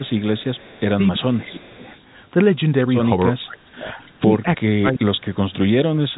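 From 0.0 to 0.79 s and again from 1.61 to 2.02 s there is echo leak: a faint copy of the far-end talker returns 331 ms late, about 30 dB and then about 35 dB under the speech, likely because a loudspeaker echo canceller failed to remove it fully.

Speech suppressed in double talk overlaps and follows this, at 0.58 to 0.95 s, 1.14 to 1.91 s, 3.31 to 3.87 s, 4.24 to 4.34 s and 4.62 to 6.13 s. The talker's level dips by about 10 to 20 dB, and by about 30 dB in the last stretch, likely because the canceller turned the near talker down along with the echo.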